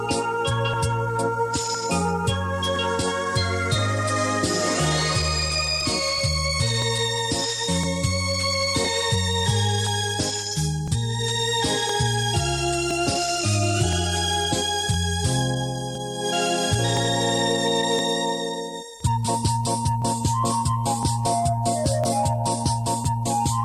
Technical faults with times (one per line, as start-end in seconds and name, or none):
0.73-23.05 periodic USB or driver dropouts